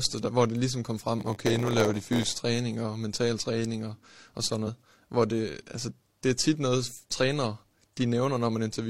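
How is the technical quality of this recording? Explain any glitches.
The recording has one clear glitch, a block size mismatch (padded), running from 1.18 to 2.40 s, between "hvor det ligesom kom" and "og mental træning og". One stage hands over shorter blocks than the next reads, and each block's shortfall is filled with zeros. These regular silent slivers produce a buzz at about 86 Hz, which fits a 512-sample read block, and the speech runs at 0.938 times normal speed. Random dropouts don't produce this steady-rate buzz together with the uniform slowdown.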